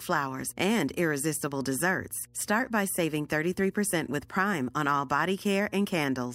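Mains hum runs throughout the speech at 60 Hz, a steady low tone roughly 30 dB below the voice, where the power line leaks into the signal path.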